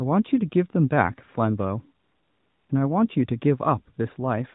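At 2.04 s the real background drops away and AMR comfort noise takes over until 2.70 s, about 0.66 s. The phone judged the sound silent and stopped sending speech frames. The receiver then filled the gap with generated noise built from a rough estimate of level and spectrum. It sounds smooth and steady, unlike the room behind it. It switches in and out abruptly. The narrowband mobile coding, light and band-limited to 4 kHz, carries through this gap.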